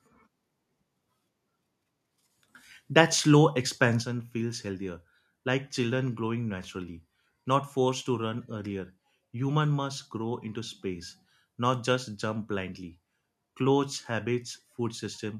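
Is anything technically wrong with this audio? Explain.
Yes, there's one problem. From about 4.02 s right through to the end, the speech suddenly drops by about 6 dB and stays there. The likely cause is one channel dropping out of a stereo source: once the two sides are summed to mono, the material they shared loses half its contribution, and anything carried only on the missing side vanishes altogether.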